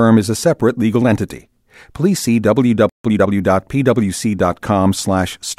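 A speech recording with a playback stall from 2.89 to 3.05 s: the sound cuts off mid-flow for about 150 ms, a flat gap in the waveform and a blank vertical band on the spectrogram, likely the player running short of data or having its output thread blocked. Time-compressed catch-up follows from 3.05 to 3.35 s, where the player plays at 1.5 times speed by splicing out and cross-fading short slices, so the speech sounds hurried at unchanged pitch. On the spectrogram, the harmonic spacing stays the same while syllables are squeezed closer together.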